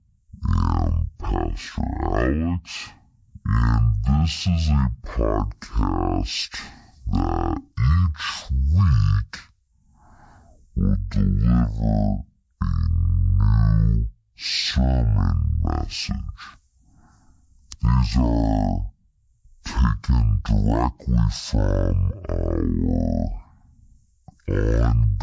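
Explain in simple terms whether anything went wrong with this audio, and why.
Something went wrong: a wrong sample rate. The recording was played back at half the speed it was made at, with nothing to correct for the change. The speech from start to finish is therefore half as fast and one full octave lower, about 12 semitones down. Voices sound deep, heavy and dragged out, which fits audio recorded at 32 kHz being played at 16 kHz.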